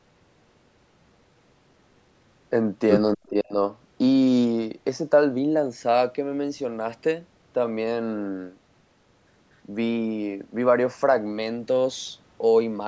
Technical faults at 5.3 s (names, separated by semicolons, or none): none